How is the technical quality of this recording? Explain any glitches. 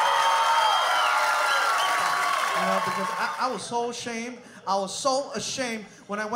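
No glitches turn up anywhere in this recording. There is nothing to explain, since no part of the sound shows a technical fault.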